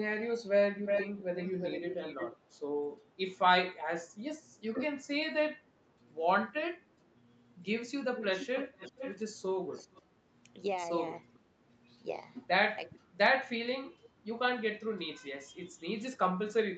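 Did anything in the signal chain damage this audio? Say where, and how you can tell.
Yes, at the call-processing stage. Echo leak: a delayed copy returns at 0.85–2.47 s (359 ms) and 8.17–10.02 s (456 ms), faintly at 11.34 and 12.94 s. The likely cause is an echo canceller leaving loudspeaker pickup.

Speech suppressed in double talk: level drops by up to about 20 dB within 3.78–5.99 s, and briefly at 6.95, 9.83 and 13.05 s. The canceller likely turned down its own talker together with the loudspeaker echo.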